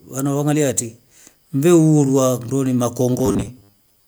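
Speech clip, and from 3.19 s to the end at 4.08 s it collapses into robotic sound from repeated short buffers: a rigid 100 Hz metallic buzz. That's likely audio arriving too seldom, with roughly 10 ms chunks looped to cover around two fifths of the stretch.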